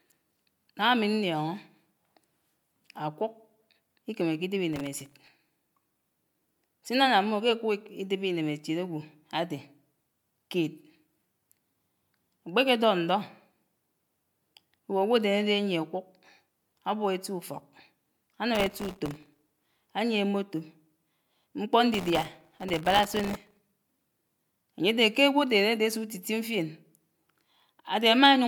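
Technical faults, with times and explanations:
Throughout: generation loss. The speech has a swirly, hollow quality, with smeared consonant attacks and a watery noise that is worse than a single MP3 encode at 128 kbit/s would produce. Content extends up to about 20.2 kHz, so the damage is not simple band-limiting. The likely cause is about three rounds of MP3 decoding and re-encoding. Each pass quantised the signal on a shifted frame grid, so its noise and spectral holes stacked on the previous ones.
4.73–5.31 s, 18.55–19.88 s, 21.94–23.59 s: processor overload crackle. Three bursts of gritty tearing ride over the speech, and the longest is the last, at about 1.6 s. In each burst the processor kept missing the deadlines for very short buffers, well under a millisecond each, dozens to a couple of hundred times in a row. Each missed buffer was filled with a stale chunk of old audio whose hard edges click against the live signal. 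Run together, these clicks form the crackle, which stops as soon as the load eases.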